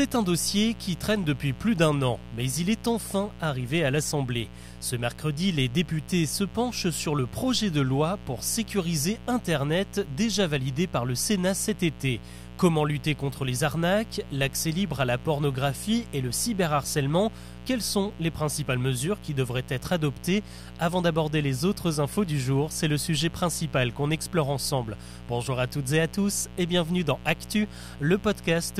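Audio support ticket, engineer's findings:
Mains buzz, present from start to end under the speech. Steady raspy hum-buzz at 60 Hz, roughly 15 dB below the voice. Probable source: dimmer, rectifier or unshielded cable coupling switching spikes into the line, twice per mains cycle, so harmonics stack up into the kHz range. Spectrogram: evenly spaced horizontal lines at 60 Hz multiples, unbroken through pauses. Waveform: raised floor between phrases, repeating at 60 Hz.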